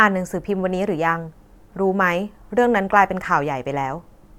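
No technical faults can be heard in this recording.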